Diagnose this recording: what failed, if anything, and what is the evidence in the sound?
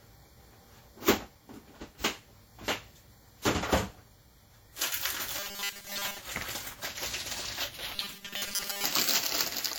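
Codec stage: WMA compression is plainly audible throughout as ringing, washy smear and breathing hiss, likely from a low bitrate, around 48 kbps.

Buffer stage: robotic sound from repeated short buffers at 5.39–6.19 s and 7.96–8.85 s. A rigid 200 Hz buzz likely comes from 5 ms buffers repeating over most of the audio.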